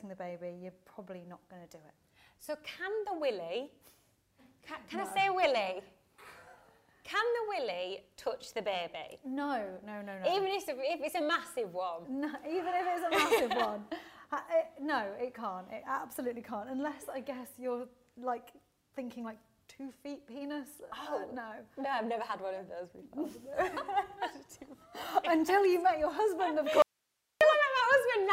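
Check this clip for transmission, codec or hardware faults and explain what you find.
One fault is present, near the end of the clip. From 26.82 to 27.41 s there is an audio dropout to a faint residue lasting about 0.59 s. The wanted signal was likely lost upstream while the path stayed live, so only hiss remains, roughly 50 dB below the signal. The abrupt cut and return set it apart from a natural pause or fade.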